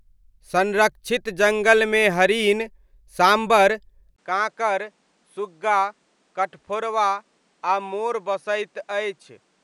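Speech, with an abrupt change of character at 4.16 s. A gap of about 20 ms marks the point. After it, and through to the end, nothing is heard above 10.7 kHz. The sound turns duller and drops by roughly 5 dB. A different background noise appears, some 40 dB below the speech. These are the marks of an input switched to a poorer device. The system likely moved to another microphone or a headset mid-recording.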